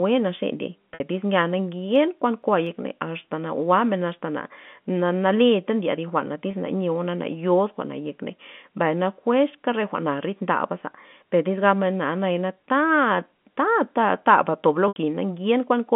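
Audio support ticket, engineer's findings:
Packet loss with pitch repetition, three spots. At 0.94 to 1.00 s, between "naxe ndiey" and "tyz nya", a 60 ms gap is bridged by a held, buzzy repeat of the last pitch period. Also at 6.51 to 6.53 s (20 ms) and at 14.88 to 14.96 s just after "tob lo" (80 ms, fading toward silence). Probable component: the jitter buffer and concealment on the receiving end, consistent with 10 ms packets dropping in runs.

CD scratch ticks, 1.95 to 2.67 s, between "tyz nya" and "asta na jwa'men asta". Four short ticks, each a couple of milliseconds at most, at a regular spacing. Probable component: the disc source upstream. A blemish beats the error correction once per revolution, so the player interpolates or mutes a few samples each time. The A-law telephone band at 150 Hz to 3.4 kHz carries the ticks through.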